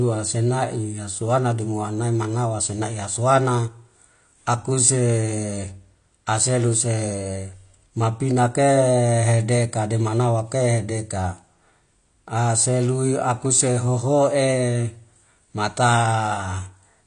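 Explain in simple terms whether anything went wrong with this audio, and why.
Something did go wrong, and it lasts the whole speech clip. The sound is dull and smeared. Nothing is heard above about 9.8 kHz, so the crisp top end is simply missing. The hiss of s and sh sounds turns fizzy or warbly. This is likely AAC compression, squeezed hard to save space. The encoder throws away the detail it thinks you won't miss. At this setting you clearly do.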